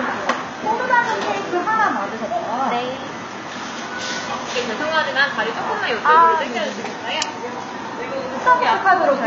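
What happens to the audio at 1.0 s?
At 1.0 s, as across the whole clip, the treble sounds synthetic: upper frequencies stay bright but turn gritty and metallic, with harmonics that fail to line up above the crossover. This is likely HE-AAC compression, rebuilding the top band by spectral band replication from copied lower bands, consistent with a very low bitrate around 20 kbps.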